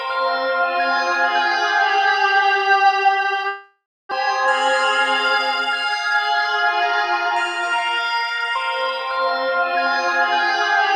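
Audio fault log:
3.47–4.13 s, long network dropout: the last sound continues as a fading buzz, then about 0.26 s of silence; 0.4 s of audio never returns, likely from lost packets.
7.36–8.48 s, jitter buffer speed-up: the audio runs about 6% fast at unchanged pitch as the receiver trims short pitch-period pieces, roughly 70 ms in all, to reduce buffered delay.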